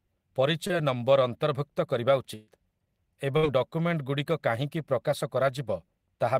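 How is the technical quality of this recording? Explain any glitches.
The speech has three network dropouts.

At 0.67 s, just before "ନମ୍ବର୍ ଅନ୍ତର୍ଭୁକ୍ତ କରିବା", a short concealed packet loss replaces about 20 ms with extrapolated sound, giving a brief smear that appears as a blurred column on a spectrogram.

Two bursts of packet loss follow: 2.35 to 2.49 s, right after "ନମ୍ବର୍ ଅନ୍ତର୍ଭୁକ୍ତ କରିବା", and 3.37 to 3.45 s, before "ଡକୁମେଣ୍ଟଗୁଡ଼ିକ କାହିଁକି ପ୍ରକାଶ". About 120 ms and 60 ms vanish, each concealed by continuing the last sound and fading it down before the speech resumes further on.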